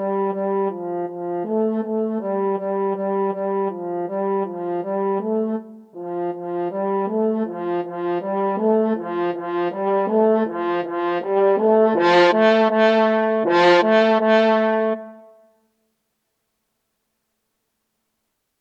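No technical faults are audible.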